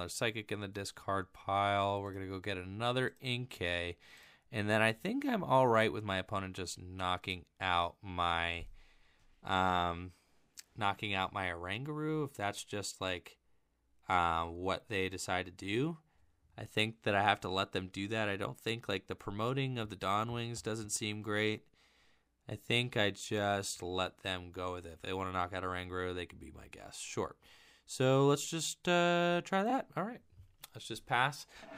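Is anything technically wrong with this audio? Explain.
Yes. At 25.04 s and again at 29.69 s the sound gives a brief stutter, a tiny hiccup where a short slice plays twice. These are repeated frames: a single compressed frame of about 26 ms was decoded a second time, so each repeat adds 26 ms and breaks continuity at the seam.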